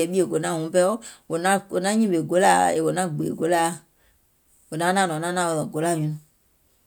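No technical faults are audible anywhere in the recording.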